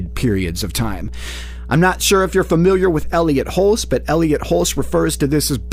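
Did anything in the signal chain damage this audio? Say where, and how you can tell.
Yes. The damage happened in the analogue wiring, before conversion. A ground loop or a nearby transformer coupled the 60 Hz power line into the signal path, which points to a North American-style supply. The result is mains hum: a steady low tone at 60 Hz with some low harmonics above it. It runs unbroken from start to finish at roughly 15 dB below the wanted sound.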